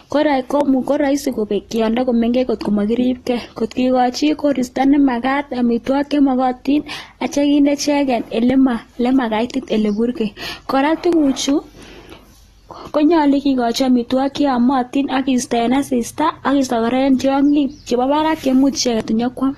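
From start to end, the speech carries AAC compression damage, and it is plainly audible. Nothing is present above 12.4 kHz. Sibilants sound smeared and fizzy. Steady sounds take on a warble. The sound points to AAC-LC at a low bitrate, likely around 32 kbps.

Clock drift buffer slips start at 0.61 s. A click follows every 2.63 s, about seven in all, running to 19.0 s. Two clocks are likely disagreeing by roughly 500 ppm. Each time the buffer drifts too far, a short block of samples is dropped or repeated.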